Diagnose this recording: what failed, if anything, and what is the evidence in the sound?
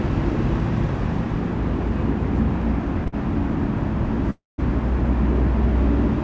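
The network and jitter buffer stage shows a short stall from a late packet at 3.08–3.14 s. The last sound is held about 48 ms with a slight buzz or dip, then resumes from the same point, losing nothing. On a spectrogram its stripes stretch horizontally. The waveform shows a briefly repeated texture.

A call audio freeze runs from 4.30 to 4.60 s. The sound carries on as a fading buzz or hiss, goes silent for about 170 ms, and then picks up from where it stopped, 277 ms late. The likely cause is packets held up in transit, emptying the jitter buffer. The spectrogram shows a smear decaying into a blank column below the G.722 path's 8 kHz ceiling. The waveform goes flat.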